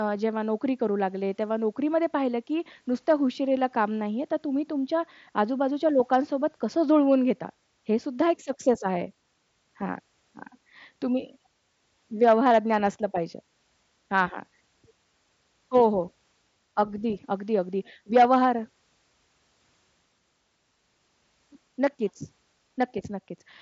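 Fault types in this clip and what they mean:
Nothing here counts as a fault; the speech simply comes through the way a wideband mSBC Bluetooth headset link carries it, with its top end stopping around 8 kHz.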